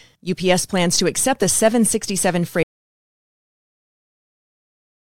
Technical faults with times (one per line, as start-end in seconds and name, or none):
2.63-5.11 audio dropout to silence